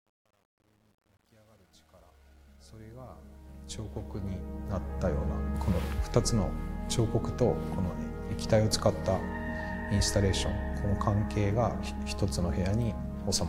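From the start to 5.06 s, the fade-in suffers truncation distortion on a fade: the gain stage keeps only 10 bits without dither, so the quietest part, worst from 0 to 3.91 s, collapses into a few coarse square steps. It sounds gritty until the rising level smooths out by 5.06 s. On a waveform the low-level portion looks stair-stepped; a spectrogram shows harsh broadband hash rather than clean, gradually rising content.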